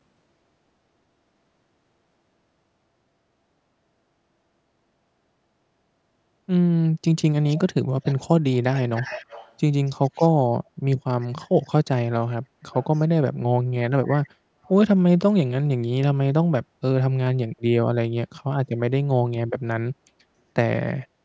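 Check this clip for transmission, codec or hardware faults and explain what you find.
There's one fault here, an echo leak, showing up in short bursts at 7.49–7.59, 8.03–8.20, 8.74–9.55, 9.86–10.29, 12.71–13.07, 14.04 and 14.64 s. You hear a faint copy of the speech trailing it by 278 ms, sitting roughly 15 to 35 dB under the talker and loudest around 9 s. Most likely the far end is on a loudspeaker and its echo canceller isn't fully subtracting what its mic picks up, so scraps get sent back. The call's mic processing, which tops out at 8 kHz, isn't part of the problem.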